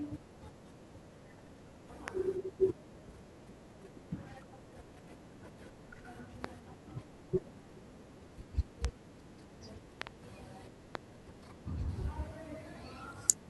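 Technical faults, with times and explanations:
2.08–2.10 s, 6.44–6.47 s, 8.85–8.87 s, 10.02–10.09 s (two pops) and 10.95–10.97 s: loud pop, sharp thumps about 20–25 dB above the speech, likely voltage pulses; tall waveform spikes, full-band vertical spectrogram lines.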